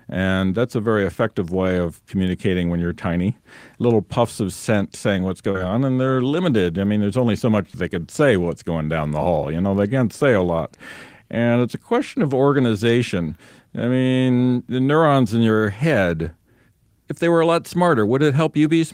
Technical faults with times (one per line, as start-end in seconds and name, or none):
5.51-5.57 short concealed packet loss
7.70-7.77 short concealed packet loss